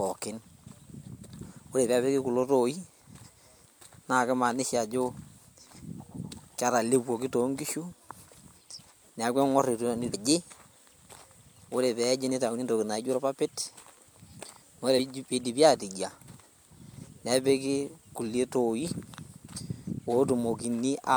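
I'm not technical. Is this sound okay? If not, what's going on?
No. In two spots, some of the compressed data carrying the speech got damaged, so the player misread it and had to find its place again. That damaged data in a compressed stream is heard as brief glitches at 10.13 s and from 14.98 to 15.00 s.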